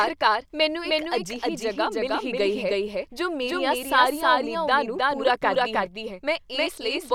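A second capture path or misaligned edit has likely mixed the speech in twice, giving a doubled audio track throughout. An equally loud, full-band copy trails the original by around a third of a second, with no decay or room colour, so every syllable repeats as a flat, distinct echo.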